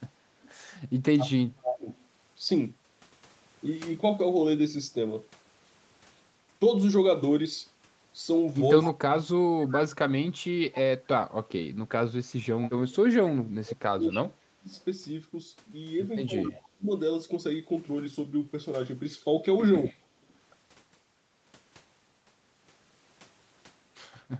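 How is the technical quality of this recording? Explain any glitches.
The recording has call-path problems: a delayed echo, and speech pumped down while both sides talk, heard through an 8 kHz band limit.

Echo leak appears at 0.42–2.05 s, 8.83–16.89 s and briefly at 20.3 s. A loudspeaker echo likely escaped cancellation, returning 252 ms late. It is nearly as loud at first, then quieter, then faint. On a spectrogram it shows as smeared, offset copies of the harmonics.

Speech is suppressed in double talk at 1.59–1.9 s and across 8.84–16.89 s, likely from the canceller ducking both talkers. The waveform shows sudden deep envelope dips, with roughly 4 s lost in the longer stretch.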